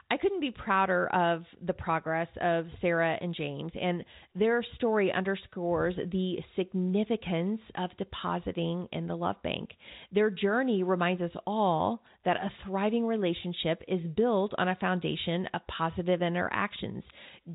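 The speech comes over a standard telephone channel consistent with 64 kbps G.711 A-law coding, band-limited to below 4 kHz with at most a faint level-following hiss, and no faults can be heard anywhere in the recording.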